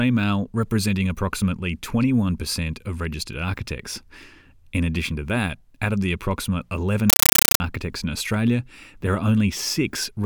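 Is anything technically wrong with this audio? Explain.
Yes. From 7.10 to 7.60 s there is a compressed stream played as audio: an AC-3 (Dolby Digital) bitstream reached the output undecoded and was treated as ordinary samples. Each coded frame becomes a dense burst of about 8 ms followed by silent padding, repeating 31.25 times a second, consistent with a 384 kbps AC-3 stream. The speech vanishes for that half-second, replaced by very loud, harsh chattering static with a rapid buzzing pulse.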